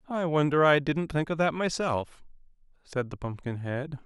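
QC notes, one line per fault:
No faults detected in this clip.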